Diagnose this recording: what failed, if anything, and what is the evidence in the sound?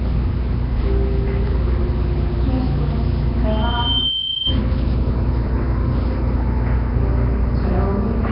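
Codec stage: hissy, underwater smearing throughout and nothing above 5.3 kHz, likely Nellymoser compression. Noise-filled gaps, not clean dullness, distinguish it from simple low-pass filtering.

Acoustic loop at playback: a loudspeaker feedback squeal at 3.1 kHz from 3.49 to 4.61 s, swelling over about 0.7 s to match the sound's level. That self-growth separates it from a steady interference tone.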